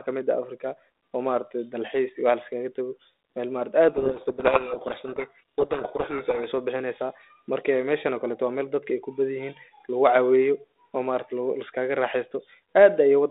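Speech over a G.726 link at 32 kbit/s. From 3.88 to 6.45 s, between "liskaga tago mel maaragti" and "sobixineysa marka meshan okaleto", a codec payload misread reverses the bit order of each G.726 code word, burying the speech in harsh distortion.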